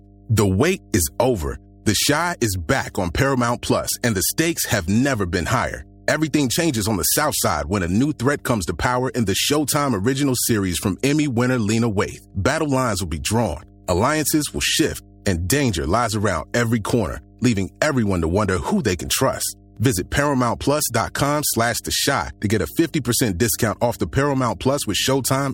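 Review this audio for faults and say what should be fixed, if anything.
There's mains hum under the speech the whole way through, a steady 50 Hz tone sitting roughly 25 dB down, from power-line coupling via a ground loop or transformer. Fix grounding, use balanced cables, and keep audio lines away from power supplies.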